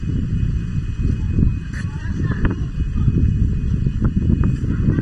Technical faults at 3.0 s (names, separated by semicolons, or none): channel delay (comb filtering)